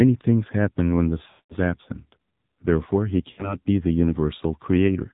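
Right from the start the whole thing has that AMR narrowband mobile codec sound. Nothing above 4 kHz survives, and the speech comes out buzzy and synthetic, clearly damaged, which fits one of AMR-NB's lower modes, around 7.4 kbps, where the vocal-tract model gets very few pulses to work with.

Then you hear lost AMR speech frames. From 1.30 to 1.55 s about 200 ms goes missing. The decoder stretches the last good pitch and filter settings with falling gain, so the sound drags and fades to silence before recovering roughly. From 3.32 to 3.56 s a shorter 60 ms loss just gives a quick dip and warble.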